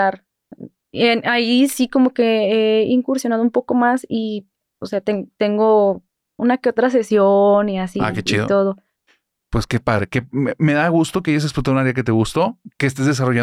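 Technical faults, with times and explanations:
No technical faults detected.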